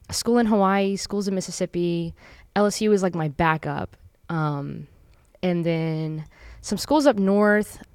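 Nothing stood out on listening to the speech in this recording.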